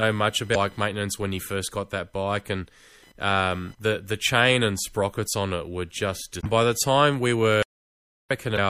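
A speech recording with several faults. Computer activity noise sits under the speech throughout. It is a faint buzz pulsing around 1 kHz, roughly 35 dB below the speech, riding on the shared ground. The speech sounds watery and swirly, with smeared attacks and dull treble. These are likely signs of MP3 compression at a low bitrate, around 64 kbps. Damaged data in the compressed stream gives short glitches at 0.52–0.56 s, 6.40–6.46 s and 8.55–8.58 s. An audio dropout to silence runs from 7.63 to 8.31 s. The audio cuts to dead silence, with no room tone, for about 0.68 s, and that stretch of speech is lost. The likely cause is a lost input while writing continued.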